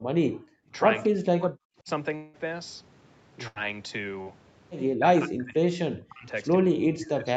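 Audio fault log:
0.00 to 0.07 s and 0.30 to 0.71 s, background gated by the echo canceller: the room sound falls away by about 40 dB, briefly at the start and then for roughly 0.4 s, and comes back once the canceller releases. Because only the background ambience vanishes, with no talker to lose, this differs from double-talk suppression. The canceller clamped the microphone hard while the loudspeaker was playing, treating everything it picked up as echo.
1.03 to 1.88 s, 5.00 to 6.29 s and 6.64 to 7.37 s, speech suppressed in double talk: the speech dips by as much as about 40 dB and drops out in pieces, adding up to around 0.7 s in the first stretch and around 1 s in the second, with the last stretch running to the end of the clip. The likely cause is the echo canceller failing to separate the near talker from loudspeaker echo while both sides spoke, so it turned everything down. Unlike gating, the speech itself breaks up.
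2.15 to 2.36 s, long network dropout: about 0.18 s of audio is missing, and a continuation of the last sound fills the whole gap with no stretch of silence, so it is heard as a held buzz or hiss that fades before the speech picks up further on. Likely a stall in delivery long enough that the receiver had to invent the entire span. The gap is longer than a packet-loss burst, though too short here to fade to silence.
3.48 to 3.58 s, burst of packet loss: an 80 ms hole is bridged by the receiver extending the preceding sound and fading it down, which gives a brief held buzz or hiss before the audio resumes with that slice gone. It is shorter than the dropout at 2.15 s. It is also too long to pass as a mere tick, which is what separates it from the concealed loss that follows.
4.22 s, short concealed packet loss: about 40 ms never arrived in time, and the decoder patched it by continuing the last pitch or noise and then blending back into the real signal. 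What reaches the ear is only a quick smear or wobble, not an audible held tone, and a short consonant may disappear. At this length the fill is too brief to fade or buzz, which distinguishes it from the longer bursts. The Opus call path, meanwhile, limits the band to about 8 kHz.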